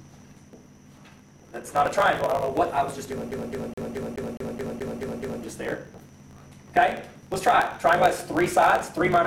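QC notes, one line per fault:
throughout: block size mismatch (truncated). Block ends are discarded, giving a 54.4 Hz buzz and 1.16x speed at near-normal pitch, which fits 1024-sample writes. Spectrogram shows evenly spaced vertical seams.
3.31–5.43 s: CD stuck on one turn. The same 0.21 s segment replays ten times with a brief mute at each jump. Waveform shows identical repeating blocks separated by thin flat gaps.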